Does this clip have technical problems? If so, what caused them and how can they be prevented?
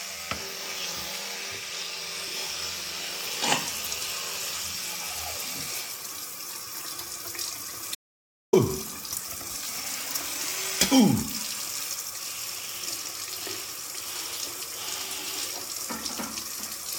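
Yes, there's an audio dropout to silence from 7.95 to 8.53 s, so roughly 0.58 s of the everyday sound just vanishes into silence with no room tone. That likely came from the input briefly disconnecting or muting while the recorder kept writing. Secure cables and connections, and monitor inputs live so any mute or link drop gets caught before the take ends.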